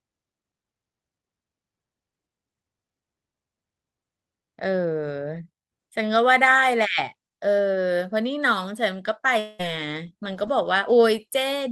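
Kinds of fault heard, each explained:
Long network dropout: From 9.39 to 9.61 s the speech gives way to a smeared, buzzy continuation of the last sound, most likely because about 200 ms of audio never arrived and the receiver filled almost all of it with concealment, never falling to silence. A spectrogram shows the harmonics blurring into fading bands under the codec's 8 kHz ceiling. The waveform shows a repetitive, decaying envelope before speech resumes with the lost part gone.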